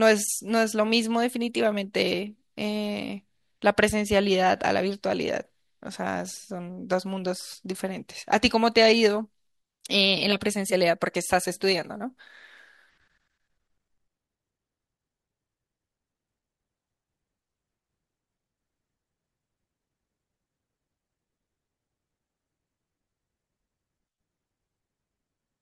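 Speech, with no technical fault to point to anywhere in it. Nothing breaks into the sound at any moment, so there is no time or cause to give.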